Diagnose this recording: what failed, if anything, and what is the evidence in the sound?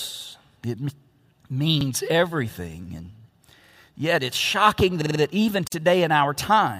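Short stutters interrupt the speech at 1.81 to 1.86 s, 3.67 to 3.76 s and 5.02 to 5.20 s. In each, a piece about 46 ms long sounds again with a hard join, once at the first, twice at the second and four times at the third. This is a repeated buffer at the driver or buffer stage. The output ran dry, so the device replayed its last block, which fits a 2048-sample buffer. Nothing is skipped afterwards, so the speech simply resumes late.

At 5.67 to 5.72 s the continuous speech drops into a gap of about 45 ms. Its edges are smeared, and the sound then picks up exactly where it stopped. This is a gap at a join of encoded pieces, a codec-stage fault. The audio was encoded as separate segments and spliced without trimming, so one run's padded final frame and the next run's start-up delay both remain as dead air at the seam.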